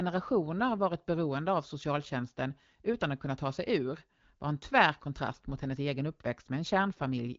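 No technical faults can be heard in this recording.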